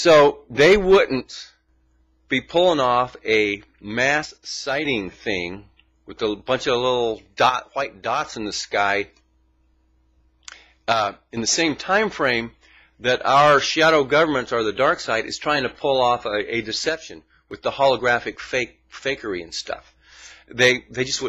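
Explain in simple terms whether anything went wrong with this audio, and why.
A few things went wrong here: the loudness suddenly steps down five times and then comes right back. It happens from 1.21 to 1.69 s, 4.25 to 4.85 s, 7.50 to 8.24 s, 10.93 to 11.37 s and 16.89 to 17.51 s. Nothing else about the sound changes. That pattern points to one channel dropping out, likely one side of a stereo feed cutting out briefly, so when the two sides are folded into one, only half the signal is left for those moments.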